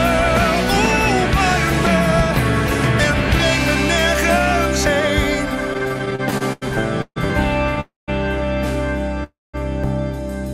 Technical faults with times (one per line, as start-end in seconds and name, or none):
4.86 dropped buffer (overrun)
5.73-6.63 repeated stalls (stutter)
7.01-7.18 call audio freeze
7.30 dropped buffer (overrun)
7.80-8.10 call audio freeze
9.24-9.55 call audio freeze
9.84 dropped buffer (overrun)